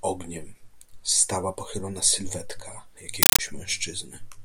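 At 3.23 s the speech gives way to harsh, very loud chattering static lasting until 3.39 s. This is a compressed stream played as audio: a Dolby Digital (AC-3) bitstream, apparently around 384 kbps, was passed as ordinary samples and never decoded. On the waveform it shows as blocks of noise about 8 ms long, separated by flat zero padding and repeating at 31.25 Hz. The spectrogram shows broadband vertical bars spanning the whole frequency range.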